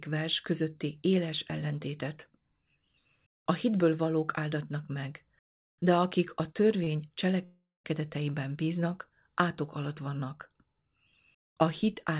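At 6.84 to 6.88 s there is a short stall from a late packet. A packet arrived after its playout time and the jitter buffer ran dry, so the receiver held the last sound for about 24 ms before resuming from the same point. Nothing is lost. The sound is briefly prolonged with a faint buzz or dip, and everything after it plays 24 ms later than before.

From 7.44 to 7.86 s the audio freezes, consistent with a call audio freeze. The last sound carries on as a fading buzz or hiss, then drops to silence for about 160 ms, before the sound picks up again where it stopped. The likely cause is packets held up in transit, emptying the jitter buffer for roughly 400 ms. No content is skipped, but a gap of that length is inserted, and the rest of the clip runs correspondingly late. Throughout, the band stops at 4 kHz, which fits a G.711 mu-law call path at 64 kbps.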